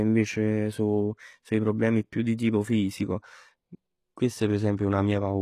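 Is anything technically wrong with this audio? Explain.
Yes. Two codec faults are audible in this speech clip.

Throughout, the treble has the bright but synthetic quality typical of HE-AAC compression, which is the likely cause. The codec coded the lower spectrum properly and rebuilt the treble from copies of lower bands under a coarse envelope. Those rebuilt harmonics don't line up with the real ones, so s sounds come out gritty and lispy. Nothing is present above 14.9 kHz, and the damage is plainly audible, consistent with a low bitrate around 20 kbps.

From 4.77 to 4.79 s there is pre-echo, a short hiss lasting about 20 ms just before a sharp onset. The transform block containing that attack spread its quantisation noise across its full length, so noise sized for the loud part leaked into the quiet moment ahead of it. The result is a brief smear that softens the attack instead of letting it start cleanly.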